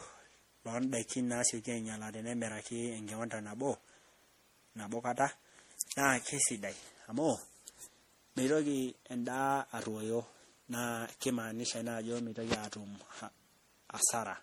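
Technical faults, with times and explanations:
Throughout, generation loss: the speech has likely been through lossy MP3 coding around seven times, which fits a chain at about 64 kbit/s, each pass quantising again on a shifted frame grid so coding noise and spectral gaps pile up. The result is swirly, smeared and hollow beyond what one pass at that rate would give, with consonant attacks blurred, even though content still reaches up to about 20.3 kHz.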